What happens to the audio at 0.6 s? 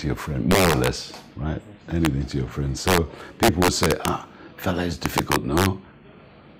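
Integer overflow runs from 0.51 to 0.87 s. The signal was driven about 6 dB past the largest integer value, and instead of being limited, each peak over that ceiling wrapped to the opposite sign, causing cracks far sharper than ordinary clipping.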